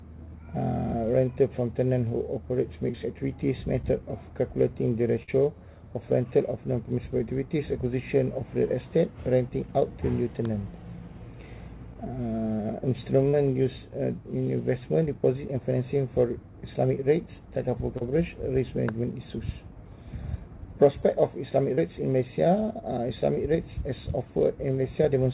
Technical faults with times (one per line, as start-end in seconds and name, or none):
2.92-2.96 short concealed packet loss
3.82-3.85 short concealed packet loss
5.23-5.30 burst of packet loss
11.94-11.97 short concealed packet loss
13.29-13.35 short concealed packet loss
17.97-18.03 short concealed packet loss
21.75-21.79 short concealed packet loss